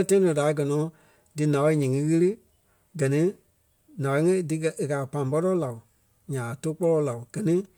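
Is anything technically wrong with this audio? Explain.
No, I hear no technical faults in this recording.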